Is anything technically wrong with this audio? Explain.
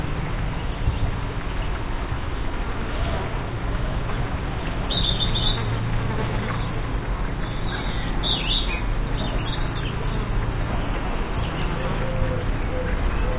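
No, nothing technically wrong can be heard anywhere in this recording.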